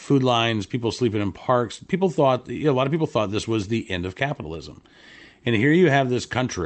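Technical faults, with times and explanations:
No technical faults are present in this speech; the audio carries the character of a working WebRTC call path, with a top end that stops near 8 kHz, consistent with Opus at a moderate bitrate of around 32 kbps.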